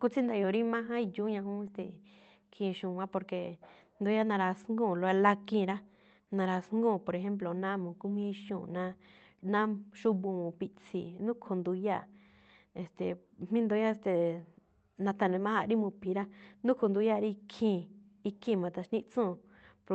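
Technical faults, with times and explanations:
No technical faults can be heard anywhere in the speech. It has passed through a WebRTC call path with an Opus-style codec, and its audible band tops out around 8 kHz.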